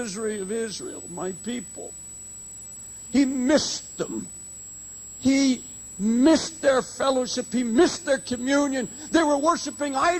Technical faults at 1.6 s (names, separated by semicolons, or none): switching supply whistle